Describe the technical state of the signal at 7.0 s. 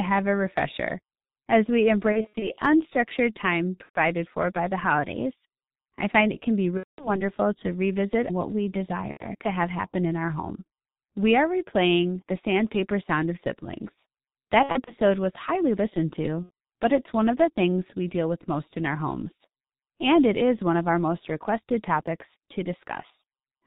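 VoIP packet loss concealed by the speech codec covers 7.0 s, running from 6.77 s to 7.18 s, just after "find it can be" and before "to revisit what we". About 210 ms of audio went missing, which fits seven lost 30 ms frames. The decoder filled the gap by extending its last pitch and filter settings at steadily falling gain, so the sound smears into a buzzy tone or coloured noise that fades. Because each frame builds on the previous one, the sound stays weak or distorted for a short while after real packets resume.

The G.723.1 codec runs throughout the clip, including this moment. The heavy, low-rate coding is consistent with a stream of about 6.3 kbit/s. Nothing above 4 kHz survives, so the speech sounds muffled. Its 30 ms frames and slowly updated voice model leave the voice hoarse and blur consonants.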